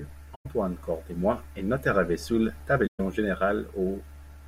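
AAC frame loss with muting leaves soft-edged holes in the speech at 0.34 to 0.46 s and 2.86 to 3.00 s. The zeroed spectra fade out and back in through the overlapping windows; the gaps fit roughly five and six frames lost.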